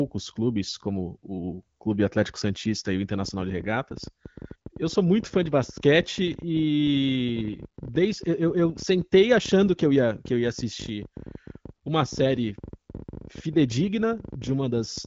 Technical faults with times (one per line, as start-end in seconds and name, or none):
3.23-15.06 train of clicks